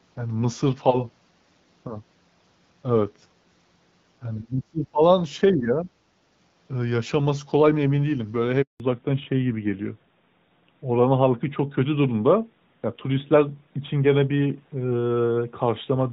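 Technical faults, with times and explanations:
4.38–5.02 s and 5.52–5.89 s: speech suppressed in double talk, the voice dipping by up to about 25 dB, then about 10 dB, likely from an echo canceller unable to separate talker from echo.
8.62–8.80 s: handover gap, 180 ms of silence as the call switched networks and no frames arrived, the voice dying away within a few tens of milliseconds.
8.8 s to end: fallback to narrowband, from AMR-WB at 12.65 kbit/s to AMR-NB at 12.2 kbit/s; nothing above 4 kHz remains, so speech turns duller and rougher, a lasting bandwidth loss rather than a dropout.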